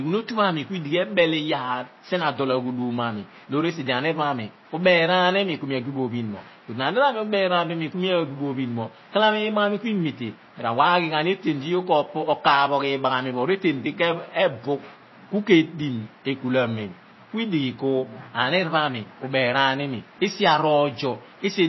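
MP3 compression runs throughout this speech: nothing sounds above about 5.8 kHz, and weak frequency lines flicker watery and swirly, likely from a low-bitrate encoder around 24 kbps.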